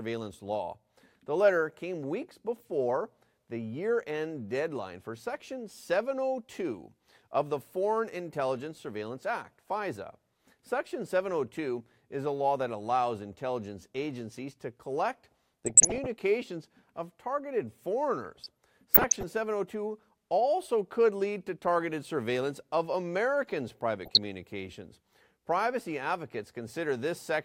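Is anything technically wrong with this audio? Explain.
Yes. The speech has DAB burbling at 15.65 to 16.06 s, 18.25 to 19.23 s and 24.05 to 24.25 s. Weak reception lets bit errors slip past error correction, corrupting MP2 sub-band levels frame by frame, so burbling blips of noise sit over the speech rather than gaps or silences as with dropouts.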